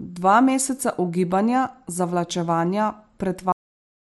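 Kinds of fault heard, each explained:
Cut-off end: the final buffers of the recording were never written or played out, so the speech stops partway through a sound at 3.52 s and drops straight to digital silence with no natural decay, staying silent for the remaining 0.64 s.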